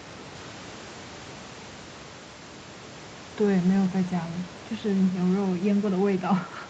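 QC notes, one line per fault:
No fault to note in this speech clip.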